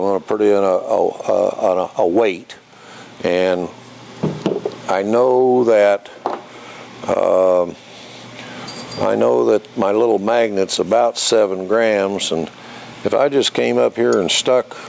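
Nothing in the audio stood out as a technical problem on listening.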